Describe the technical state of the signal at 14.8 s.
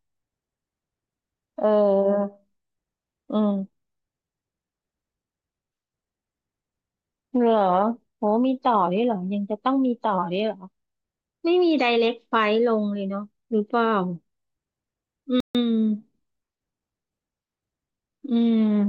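At 14.8 s the speech signal is intact, with no dropout, distortion, glitch or other technical fault audible.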